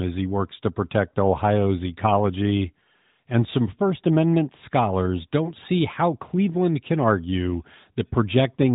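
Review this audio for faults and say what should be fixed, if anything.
No faults; nothing to fix.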